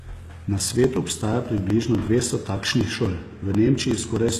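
A speech recording with two audible faults. Throughout, the treble has a synthetic, gritty quality: sibilants sound metallic and lispy, and the upper harmonics don't sit naturally with the lower ones. Nothing is present above 12.3 kHz. The likely cause is HE-AAC compression at a low bitrate, around 16 kbps. The codec spends its bits only on the lower spectrum and fills in the treble by copying lower bands upward under a coarse envelope, which produces this mismatched brightness.

The clip also has periodic USB or driver dropouts. From 0.11 s to 4.29 s, a short tick recurs every 0.123 s, around forty in all, each marking a skipped chunk of roughly 2 ms. The even spacing points to a background task stalling the USB bus or audio driver on a fixed cycle. Because each lost fragment is skipped rather than padded with silence, the audio jumps slightly at every interruption.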